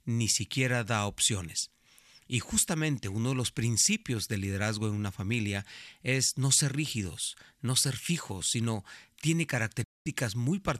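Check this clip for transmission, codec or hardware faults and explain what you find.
One fault stands out in this speech clip, a digital broadcast dropout near the end.

From 9.84 s to 10.06 s the audio cuts out for about 216 ms. The receiver stopped getting usable frames, either losing the signal or rejecting frames that failed their checksum, and muted until clean data returned. The length fits roughly nine lost frames. The sound drops away within about 3 ms, leaving a sudden hole, and whatever was sent in that gap is gone. On a waveform this shows as a flat line with near-vertical edges. A spectrogram shows a blank vertical band across every frequency.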